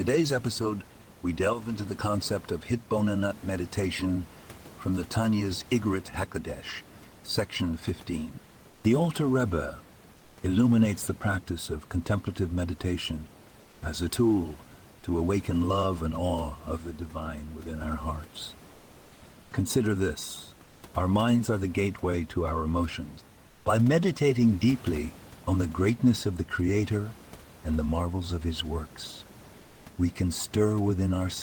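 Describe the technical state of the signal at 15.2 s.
At 15.2 s the signal is intact, with the speech carried cleanly over the room's own background noise, which sits about 25 dB below it.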